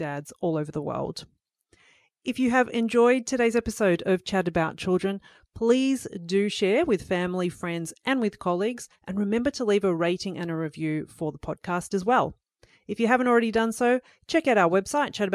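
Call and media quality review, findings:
No audible faults found in this speech clip.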